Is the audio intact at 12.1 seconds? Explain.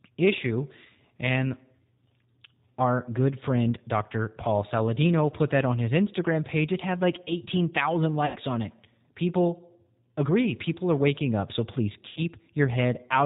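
No. From 12.09 to 12.21 s there is VoIP packet loss concealed by the speech codec: about 70 ms of audio was missing, so the decoder extended its last pitch and filter, lowering the gain as it went. The G.729 codec, present throughout, limits the sound to below 4 kHz and builds it from a coarse pulse model, giving speech a rough, synthetic edge.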